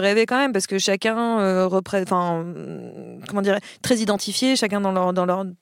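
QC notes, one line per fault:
3.27 s and 4.17 s, dropped buffer (overrun): two small forward jumps in the speech, the first just before "comment dire très" and the second just after "hum comment dire très". Each time, a slice of roughly 15 ms is missing and the surrounding audio is spliced together without any gap, likely because samples were overwritten before they were read. The waveform shows an abrupt discontinuity, and the spectrogram shows a thin full-height vertical line.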